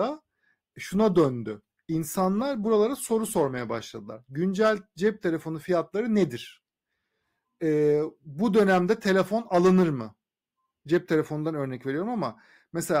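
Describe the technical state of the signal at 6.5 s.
At 6.5 s the speech signal is intact, with no audible technical fault at that moment.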